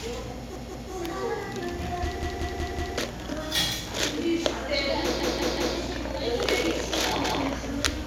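At 0.56, 2.23, 5.20 and 7.25 s a repeated buffer replays a 186 ms chunk (fitting an 8192-sample buffer) two, four, three and one extra times, heard as stutters; waveforms show identical blocks with hard seams.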